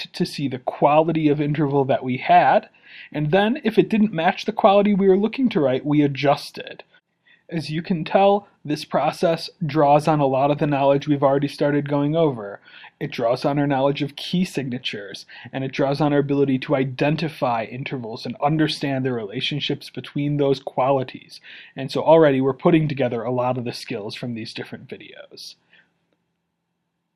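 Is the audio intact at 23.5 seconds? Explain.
Yes, at 23.5 seconds the audio is intact, with no fault heard there.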